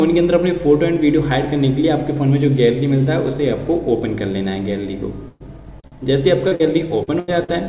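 At 5.28 s the sound freezes into a held, fading sound for about 0.15 s before jumping ahead. This is a burst of packet loss. Several packets went missing, the receiver extended and faded the last sound, and about 40 ms of audio is gone.

At 5.80 s a brief smear appears. It is short concealed packet loss: a packet never arrived in time, so the receiver briefly continued the previous sound and blended back, and about 40 ms is missing.

Right after it, at 5.87 s, a sound lingers slightly too long with a faint buzz or dip. This is a short stall from a late packet. The jitter buffer ran dry, the receiver stretched the last sound for about 44 ms until the packet arrived, and nothing is lost.

More smears and small wobbles of the same short concealed packet loss follow at 6.48, 6.55 and 7.04 s, each covering a missing packet.

At 7.19 s another held, fading stretch marks a second burst of packet loss, with about 80 ms skipped.

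A final short concealed packet loss smears the sound at 7.44 s.

All of this sits within a band that stops at 4 kHz, which fits a G.711 mu-law call path.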